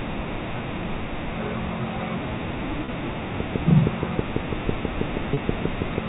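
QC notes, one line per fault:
2.85 s and 5.34 s: packet loss with pitch repetition. Each time a single gap of about 30 ms opens, and the receiver covers it by replaying the most recent pitch period instead of leaving silence. Because the loss is so short, the repeated cycle never has time to fade out, so each event is heard as a brief held, buzzy stretch of tone. That sustained, periodic quality marks it apart from a click, which is a single sharp transient with no pitch.
3.40 to 5.99 s: train of clicks. Sharp ticks of much the same shape arrive at a steady 6.2 per second, roughly fifteen in all, standing well above the sound at around 20 dB louder at their peaks and continuing through pauses as well. A regularly timed pulse like this likely comes from electrical interference or a struggling interface. The even spacing and similar shape separate it from packet-loss repairs, which take on the pitch of the sound around them.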